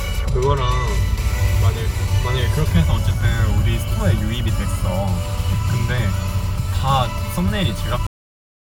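Everyday sounds play through steadily until 8.07 s, where the audio stops dead in the middle of a sound and falls straight to digital silence for the remaining 0.62 s, with no natural decay or tail. This is a cut-off end: the final buffers of the recording were never written or played out, so whatever was sounding at that instant is simply truncated rather than allowed to fade.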